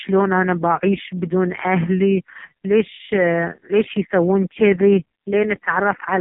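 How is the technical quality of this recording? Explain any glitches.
Pretty rough: the whole clip has been through the AMR narrowband mobile codec, and heavily. Nothing above about 3.8 kHz survives, so the speech sounds boxed-in. The vocal-tract model, starved of bits, makes it buzzy and synthetic, which points to the codec's lowest mode, around 4.75 kbps.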